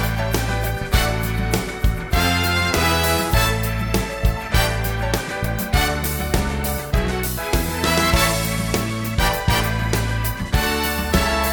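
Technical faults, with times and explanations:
No technical faults can be heard anywhere in the clip. Nothing in the audio calls for a time or an explanation.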